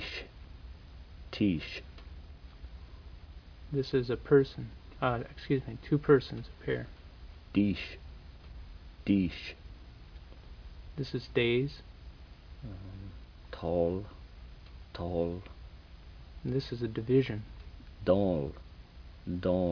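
Aliasing throughout: downsampling without an anti-alias filter, pointing to roughly 11 kHz, folds highs back below 5.5 kHz as gritty, unrelated tones about 30 dB down, unlike clean, dull band-limiting.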